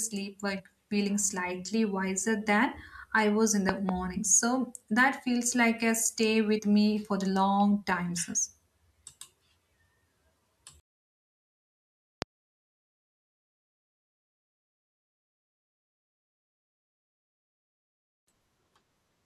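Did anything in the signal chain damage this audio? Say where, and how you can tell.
Yes. At the codec stage, compressed frames were skipped at 0.58 s and 6.57 s, dropping about 50 ms and 70 ms, multiples of 23.2-ms frames, so the sound jumps ahead with a smeared blip rather than a hard click.

A loud pop, about 20 dB above the signal, hits at 3.69 s as a double pop and at 12.22 s as a single one. The sound continues underneath without jumping, likely from a plug or static discharge in the analogue wiring.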